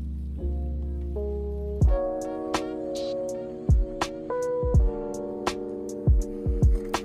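No technical faults occur at any point in this clip, so there is nothing to describe in time order.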